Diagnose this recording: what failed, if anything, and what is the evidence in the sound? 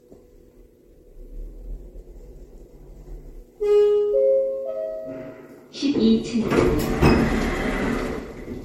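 Throughout the clip the sound is swirly, smeared and hollow, transients blur, and nothing is present above 16.5 kHz. This points to the codec stage, likely generation loss: roughly four successive MP3 encodes, consistent with 64 kbit/s, each requantising on a shifted frame grid and compounding noise and spectral holes.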